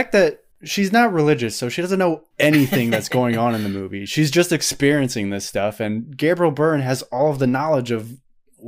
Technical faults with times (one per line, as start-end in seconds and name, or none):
0.00-0.22 hard clipping